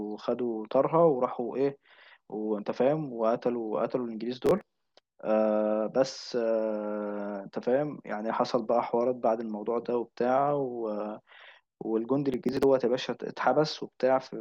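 A speech recording with two short bursts of gritty, tearing crackle, at 4.46 to 4.65 s and 12.34 to 12.63 s. This is processor overload crackle: run after run of roughly 10 ms buffers missing their deadline and being skipped, each leaving a hard-edged gap in the sound.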